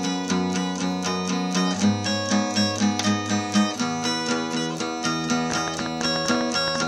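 Likely interference from nearby equipment or a faulty connection injects a train of clicks into this everyday-sound recording from 5.50 to 6.83 s: about fifteen similar pops at an uneven pace, around 11.4 per second, peaking roughly 15 dB above the sound.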